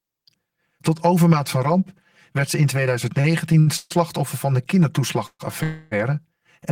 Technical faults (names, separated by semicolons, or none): channel delay (comb filtering); repeated stalls (stutter); call audio freeze